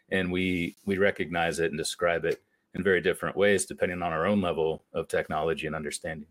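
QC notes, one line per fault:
0.74–0.77 s, 2.77 s and 4.78 s, gap at a join of encoded pieces: short dropouts about every 2 s. The first runs about 30 ms between "and we" and "we recognize it and". The others last about 11 ms, after "it and describe it" and after "depending on our own". The speech was encoded in separate chunks and butted together untrimmed, so encoder start delay and last-frame padding leave brief holes with smeared edges.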